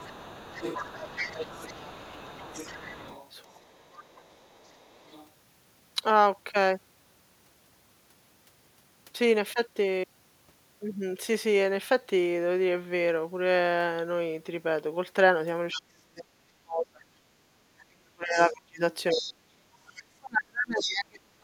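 From the start to 5.28 s there's the other side's voice leaking through, sitting roughly 20 dB under the talker. It's likely loudspeaker echo the canceller didn't fully strip out. Inside that stretch, from 3.43 to 4.04 s, there's speech suppressed in double talk. The talker dips by up to around 30 dB for a few hundred milliseconds, likely because the canceller couldn't tell them apart from the echo and pulled both down.

The bigger one starts at 15.73 s and runs to the end. The talker's voice keeps getting squashed, by as much as about 40 dB, over roughly five seconds in total. That's again likely the canceller ducking both sides while they overlap. Through that same stretch, scraps of the other side leak back in at 17.79–18.55 s (roughly 20 dB down), then at 19.1–19.32 s and 20.8–20.91 s. Those last two are louder, only about 10 dB below the speech, and likely echo residue slipping past.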